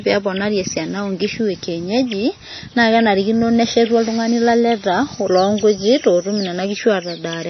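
From the start to the end of the clip the speech carries plainly audible MP3 compression damage. Nothing comes through above about 6.1 kHz, so the top end is sliced off and the sibilants lose their air. The rest has that watery, swirly quality you get when an encoder runs short of bits and weak frequency lines drop in and out from frame to frame. It likely comes from a low bitrate, something around 24 kbps.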